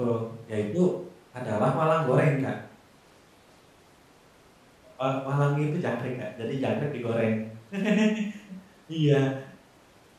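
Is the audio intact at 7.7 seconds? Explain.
Yes, the speech is intact at 7.7 seconds, with no audible fault at that moment.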